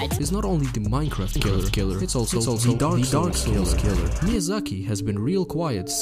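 From 1.36 to 4.36 s a doubled audio track appears: an equally loud copy trailing about 300 ms behind, likely a second capture path, showing as shifted repeated waveform shapes with abrupt edges.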